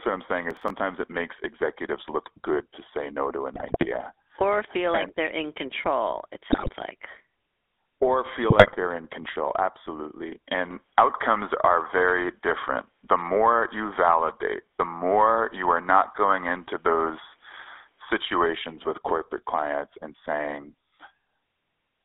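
GSM full-rate codec, from start to finish: the speech has passed through the original 13 kbps GSM coder, which models the vocal tract and excites it with a regular pulse train carrying only a fraction of the excitation samples. The line carries roughly 250 Hz to 3.6 kHz, so the voice is thin and band-limited, and the coarse excitation gives it a plainly audible buzzy, gravelly roughness.

Processor overload crackle, 0.51 to 0.70 s: the processor repeatedly failed to fill its audio buffers on time. The short run of stutters fits buffers of around 5 ms, with several missed in a row. Each missed buffer was filled with stale audio that has hard edges at both ends. Those repeated splices merge into a brief gritty tearing laid over the voice, which clears once the load drops.

GSM bit errors, 3.54 to 3.86 s, 6.52 to 6.70 s and 8.50 to 8.76 s: corrupted bits reached the decoder, distorting the filter, pitch and gain parameters frame by frame. 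The first burst falls between "to say no to" and "or feel like they're", and the second comes right after "they're in control it". Each burst comes out as squawks, pops and a gargling break-up of the voice.

Input switched to a poorer device, 10.71 to 18.46 s: this is likely a mid-recording change of input, starting just after "they're in control absolutely" and lasting until "with corporate clients and". There is no gap at the switch. The tone changes abruptly, the level shifts by a few decibels, and a new noise floor sits well below the voice. The sound becomes duller and boxier until the original input returns.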